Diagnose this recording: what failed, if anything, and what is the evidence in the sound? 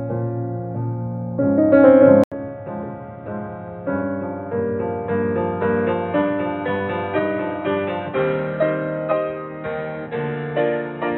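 The fault is at the capture stage: an input switched to a poorer device partway through. At 2.24 s the audio drops out for 80 ms, then stays dull and boxy to the end, with nothing above 3.9 kHz, the level roughly 10 dB lower, and a new background noise some 40 dB under the signal. The system likely moved to another microphone or a headset call profile, whose narrower band and noise replace the original input.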